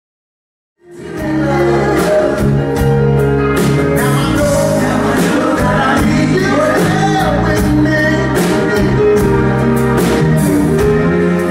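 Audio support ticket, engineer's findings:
No defects found in the signal path; the gradual level rise at the opening, starting around 1 s and reaching full level by 1.82 s, is an editorial ramp rather than a fault.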